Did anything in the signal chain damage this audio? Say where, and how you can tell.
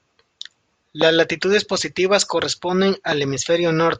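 Yes. Two loud pops sit on the analogue wiring stage: 1.02–1.04 s, before "latitudes positivas corresponden", and 3.12–3.14 s, after it. They peak about 15 dB and about 10 dB above the speech. Likely a voltage spike from a plug or switch.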